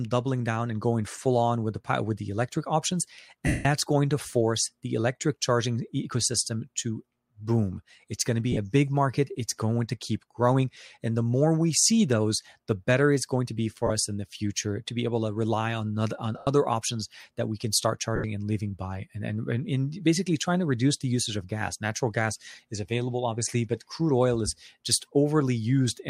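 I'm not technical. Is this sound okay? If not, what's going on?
No. Lost LE Audio frames at 3.47 s (after "with the electric options"), 8.52 s, 13.87 s, 16.38 s and 18.16 s: brief Bluetooth dropouts, 30 to 180 ms, where the decoder repeats a blurred copy of the previous sound.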